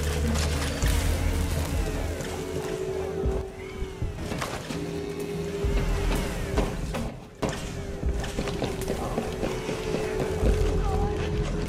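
A gain setting likely switched without any ramp, producing two sudden gain jumps: from 3.41 to 4.18 s the level drops about 6 dB, and from 7.08 to 7.42 s about 10 dB, with sound and background falling and recovering together abruptly.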